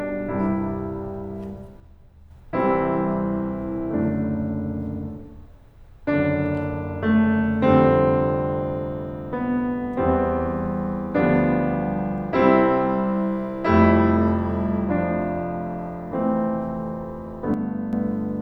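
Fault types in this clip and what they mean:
One channel drops out: the music falls abruptly by about 6 dB from 1.8 to 2.31 s and from 17.54 to 17.93 s, likely from one stereo channel going silent before the mono sum. The waveform steps sharply to half height, and the spectrogram shows an evenly dimmer block.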